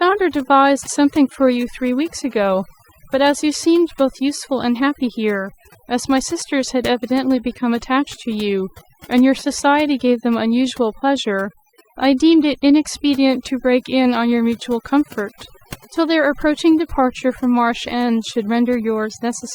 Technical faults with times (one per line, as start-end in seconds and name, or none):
0.00-19.55 overdone noise removal